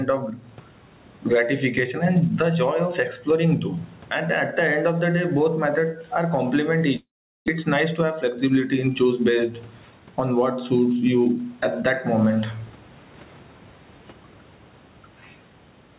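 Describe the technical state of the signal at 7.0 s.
At 7.0 s the signal is inside a long network dropout running from 6.96 to 7.50 s. The sound breaks off and the receiver stretches the last fragment into a fading buzz, which drops to near-silence. About 0.4 s of audio is simply lost before sound resumes. A packet stall is the likely cause. On a spectrogram this shows as smeared, repeating bands dissolving into an almost empty gap. On the waveform the envelope decays to a flat line.

Gain pumping is also present here, as it is throughout the clip. Input gain set far too high is likely being reined in by a fast limiter, with swings of about 15 dB. Loud and soft parts end up closer in level, and the sound is squashed. On the waveform the peaks look flattened.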